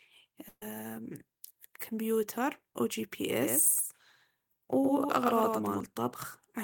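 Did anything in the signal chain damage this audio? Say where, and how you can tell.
Yes. From 0.48 to 0.62 s the sound stops moving forward and smears into a held, decaying continuation of the last sound that sinks away, with a brief stretch of near-silence before the speech picks up again, clearly further along than where it stopped. This is a burst of packet loss on the network. About 130 ms of audio never arrived, and the receiver's concealment stretched the last good fragment across the hole while fading it down.

From 3.42 to 5.80 s everything is followed by a flat, slapback-like repeat about a tenth of a second behind and roughly 5 dB quieter. The repeat has no room tail or tonal colouring, and it switches on and off abruptly at those two times. That points to a doubled audio track rather than acoustic echo. The likely cause is the same signal being picked up a second time through a slower capture or monitoring path and mixed back in.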